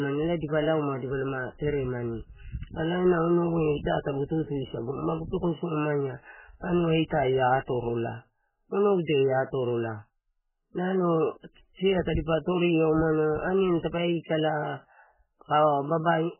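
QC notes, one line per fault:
Throughout: heavy MP3 compression, likely, and it's rough on this speech. Nothing gets through above 3 kHz, so everything sounds dull and boxed in, with the s sounds blunted. What's left has that watery, swirly texture, with small metallic chirps as weak frequency bands drop in and out from one frame to the next. Consonant onsets are smeared too. Damage this heavy points to a very low bitrate, something like 8 kbps.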